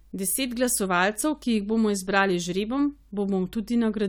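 No technical faults can be heard anywhere in the speech. Nothing in the audio breaks up, drops out or shifts at any point.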